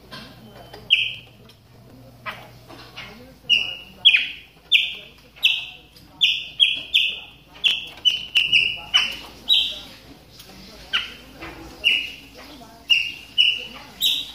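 Processor overload crackle runs from 1.15 to 1.93 s and 7.66 to 8.41 s: missed deadlines on roughly 5 ms buffers skip dozens of chunks, producing gritty tearing.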